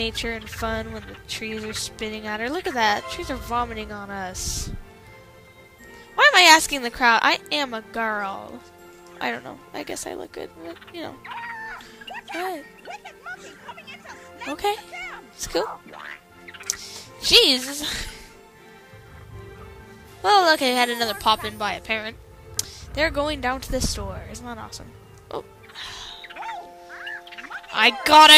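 No technical faults can be heard anywhere in this audio.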